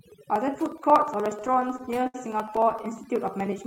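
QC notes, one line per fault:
Throughout: overdone noise removal. Bands near the noise floor are pulled down too hard, leaving a lowered background that breaks up into twinkling specks.
0.06–3.66 s: periodic USB or driver dropouts. Every 0.06 s a sliver of audio is skipped, so regular ticks run under the voice wherever signal is present.
1.37–2.85 s: repeated stalls (stutter). The jitter buffer ran dry 28 times. The last sound was stretched to fill about 341 ms, with the longest hold at 67 ms, so speech drags and stutters.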